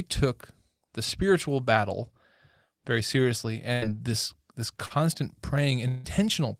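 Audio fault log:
3.73–3.84 s and 4.86–4.92 s, burst of packet loss: about 80 ms, then about 40 ms, of speech never arrive. The receiver extends the last sound and fades it, so the spectrogram shows smeared, repeating bands that dim, and the waveform then jumps abruptly ahead.
5.88–6.06 s, long network dropout: about 160 ms of speech is missing, likely from a network dropout. It is filled by the preceding sound, held and decaying with no silent stretch. The spectrogram shows flat, blurred bands and the waveform shrinks before speech resumes further on.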